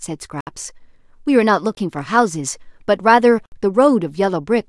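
At 0.41 to 0.47 s, 1.75 to 1.77 s and 3.46 to 3.52 s the speech drops into a block of digital silence, 64 ms, 21 ms and 64 ms long. The short one fits a 512-sample buffer left unfilled. The edges are hard and unfaded, unlike a smoothed dropout.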